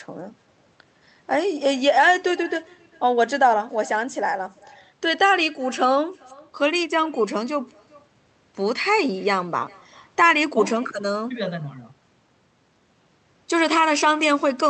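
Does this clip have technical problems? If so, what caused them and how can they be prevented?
Yes. Throughout the speech there is echo with no canceller. A faint copy of the talker, about 27 dB below the direct sound, returns roughly 400 ms later. The far end is playing the call through a loudspeaker, its microphone picks that sound up, and nothing subtracts it before it comes back. Unlike room reverberation, which decays smoothly right after each sound, this is a distinct, thinner repeat separated by a clear gap. It also sits on top of the call's normal coding, which keeps content up to about 8 kHz. Enabling acoustic echo cancellation at the far end, or having that listener use headphones, would prevent it.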